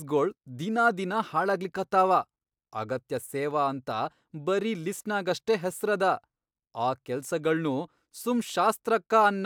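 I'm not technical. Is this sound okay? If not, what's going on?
Yes, nothing in this recording stands out as a technical problem; the signal stays steady and intact the whole way.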